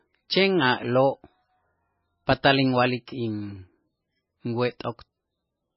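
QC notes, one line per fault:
Throughout, MP3 compression. Nothing above 5.5 kHz remains. The speech sounds watery and swirly. This is likely a starved encoder, consistent with a bitrate near 14 kbps.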